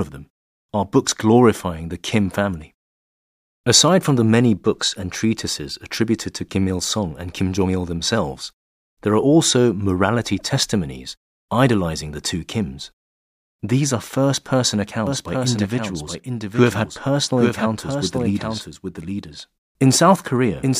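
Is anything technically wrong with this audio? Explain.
Yes. From 15.07 s, just after "are first person", to the end of the clip, a doubled audio track appears, likely because a second, slower capture path is feeding the same signal into the mix. A complete, full-band copy of the speech runs roughly 0.7 s behind the original and about 5 dB quieter. It has no reverberant tail or room colouring. It enters abruptly and lasts to the end, so every phrase is followed by its own distinct, overlapping echo.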